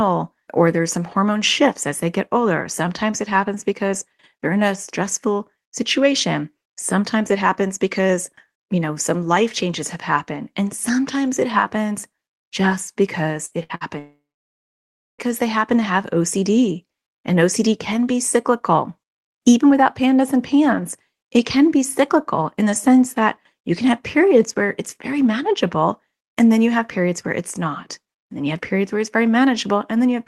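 Right after "sometimes it happens just", a burst of packet loss hits three times in quick succession, at 13.45 to 13.54 s, 13.63 to 13.72 s and 13.75 to 13.84 s. Each time, roughly 60 ms of audio failed to arrive. The receiver papered over each hole by extending the last sound and fading it, so the speech stutters through three short smears, skipping a little material at every one.

At 13.99 s a long network dropout follows, most likely a stall in the connection, and about 1.2 s of speech never arrives. The concealment stretches the last sound for only around 0.2 s before it dies away, leaving roughly a second of silence. Speech resumes at 15.21 s with "they happen to have", and everything from the gap itself is gone.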